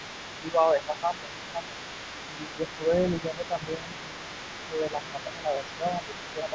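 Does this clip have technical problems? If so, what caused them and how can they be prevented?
Yes. A second voice leaks through for the whole clip, from start to finish, at about 15 dB below the main speech. This is other side's voice leaking through, likely caused by the far end playing on the talker's loudspeaker and the echo canceller leaving a residual of that playback in the microphone signal instead of subtracting it fully. Prevention: use a headset, or improve the echo canceller's adaptation and residual-echo suppression.

The main talker's speech is also pushed down by roughly 10 dB in five stretches, at 0.39 to 1.77 s, 2.24 to 2.61 s, 2.77 to 2.92 s, 3.21 to 4.2 s, and 4.68 s to the end. This is speech suppressed in double talk. When both sides speak at once, the canceller likely cannot separate near-end speech from echo and attenuates everything, so the talker dips while the leaked voice is active. 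Prevention: use a canceller with reliable double-talk detection.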